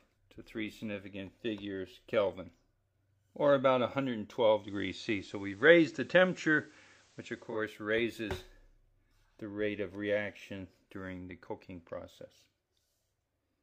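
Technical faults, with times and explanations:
4.53–7.62 s digital radio blending to analogue: faint hiss rises and level shifts about 2 dB as the receiver crossfades over 207 ms to FM and back.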